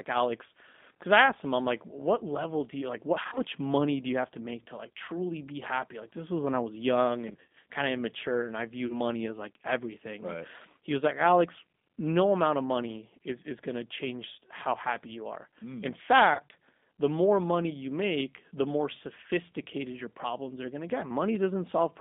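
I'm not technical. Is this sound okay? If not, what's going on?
No. The speech sounds thin, rough and slightly robotic throughout, like a cheap phone call. That comes from the G.729 codec, a phone-call compression method that rebuilds the speech from a rough model of the voice and drops everything brighter than a telephone line carries.

There are also brief buzzy, smeared dropouts at 3.23–3.42 s (just before "money do you have"), 7.28–7.56 s (after "when I was young"), 8.87–9.01 s (after "of immature and I") and 16.34–16.40 s. These are VoIP packet loss concealed by the speech codec. Pieces of the call went missing, and the decoder filled each gap by stretching the previous sound into a fading tone. The speech stays weak for a moment after each gap.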